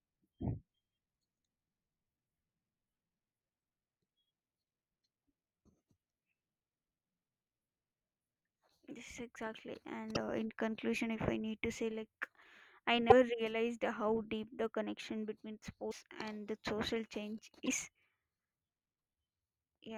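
At 10.14–10.17 s, 13.09–13.12 s (just before "realized how"), 15.90–15.93 s (after "the connection between") and 17.65–17.68 s (after "and the social change"), the speech skips ahead with a brief glitch about one 24 ms frame long, likely a broken MP3 bit reservoir, where frames decode against another frame's bytes after a cut.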